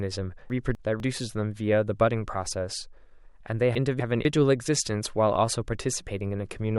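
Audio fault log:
0.50–1.00 s and 3.75–4.25 s, chunks out of order: in each span, a 250 ms piece of speech arrives one chunk late, so it plays after the piece that should follow it. Nothing is missing, but the two quarter-second pieces are heard swapped. That gives a brief jumbled stretch where the sound runs backwards in sequence, with three hard joins where unrelated edges meet.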